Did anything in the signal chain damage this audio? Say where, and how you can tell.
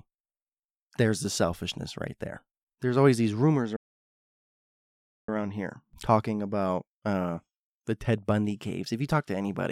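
Yes, a playback stall. Right after "always these rumors" the speech just drops out at 3.76 s and sits silent for about 1.5 s, picking up at 5.29 s with "here talking about uh". Likely the player starved for data or got blocked before recovering.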